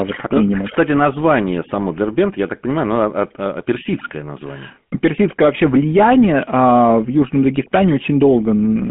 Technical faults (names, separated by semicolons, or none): GSM full-rate codec